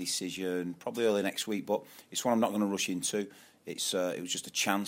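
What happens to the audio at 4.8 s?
Nothing goes wrong at 4.8 s; the audio is intact there, with no dropout, click or other fault at that moment.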